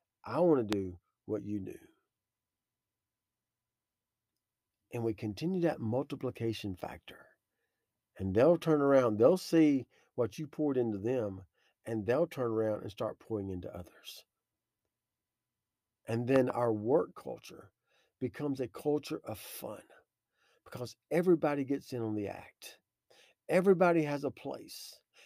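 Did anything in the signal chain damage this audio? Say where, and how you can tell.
Yes, there are two loud pops: a single one at 0.73–0.75 s after "I want to", about 20 dB over the speech, and a double at 16.36–16.52 s before "work culture becomes a", about 15 dB up. The speech carries on underneath, so it's a voltage pulse added in the analogue wiring, likely from a plug, switch or static.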